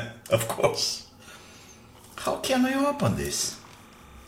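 From 2.45 s to the end at 4.28 s there's timecode bleed: linear timecode from a nearby track or cable leaking in, roughly 30 dB under the sound. You get a steady chirpy warble flipping between about 1 and 2 kHz, consistent with 29.97 fps code.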